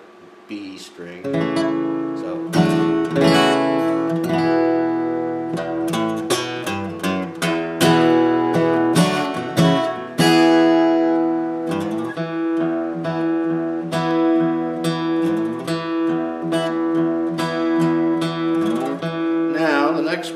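A handful of samples were likely dropped from the stream, each loss a fraction of a millisecond, producing single sharp clicks at 1.18 s and 14.11 s.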